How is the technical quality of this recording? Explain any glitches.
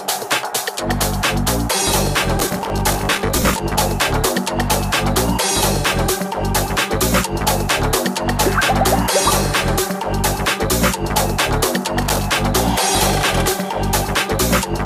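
The recording has two bursts of processor overload crackle. The first runs from 2.39 to 3.60 s. The second, shorter one runs from 12.02 to 12.27 s. In each, the processor falls behind and misses buffer deadlines over and over. Each buffer lasts around 10 ms. Every missed buffer replays a scrap of old audio with hard edges. Dozens pile up in the first burst and roughly fifteen in the second. This is heard as gritty, tearing crackle riding on the sound.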